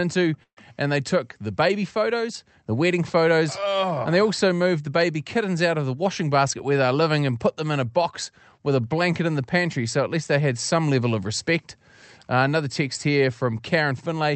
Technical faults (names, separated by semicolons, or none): call audio freeze; jitter buffer speed-up